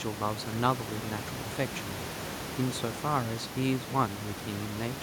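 Nothing technical goes wrong in this speech recording; the only thing under it is some ordinary room noise sitting about 11 dB below the speech, which belongs to the space the microphone was in rather than to the system.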